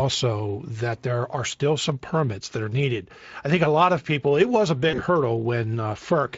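At 4.89 s, just after "was a", the speech breaks up with VoIP packet loss concealed by the speech codec, lasting until about 5.01 s. About 40 ms of audio went missing, which fits two lost 20 ms frames. The decoder filled the gap by repeating its last pitch and spectral shape at falling gain, so the sound smears into a brief buzzy tone or coloured noise that fades. Because each decoded frame depends on the previous one, the signal stays weak or distorted for tens of milliseconds or more after packets resume. Throughout the clip, the Speex coding leaves only light coding damage.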